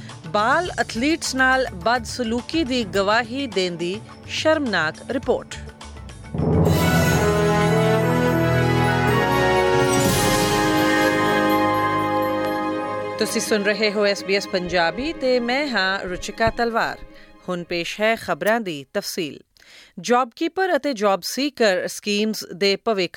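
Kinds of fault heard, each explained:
Loud pop: a single sharp pop lands at about 12.45 s, lasting around 20 ms and peaking roughly 5 dB above the surrounding sound, which continues underneath. It is likely a brief voltage pulse from a switch, plug or static entering the signal chain. On a waveform it shows as one narrow spike standing clear of the envelope. On a spectrogram it appears as a thin vertical stripe spanning the whole frequency range.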